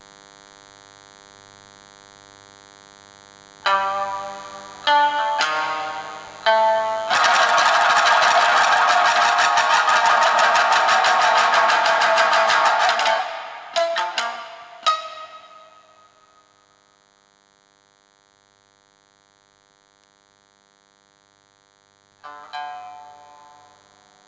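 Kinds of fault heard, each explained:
DECT cordless phone buzz: Radio bursts every 10 ms from a nearby DECT handset or base are rectified into a thin, harmonic-rich 100 Hz buzz, sitting roughly 40 dB below the signal throughout.
Gain pumping: The gain swings by around 15 dB, squashing dynamics, likely from excessive input gain driving a fast limiter or compressor.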